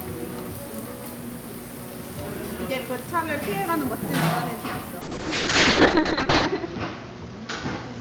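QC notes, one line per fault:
5.02–8.01 s, call bitrate drop: sound turns rough and watery, consistent with roughly 6 kbps; spectrogram shows content cut off above 8 kHz, bottoming out for 1.45 s.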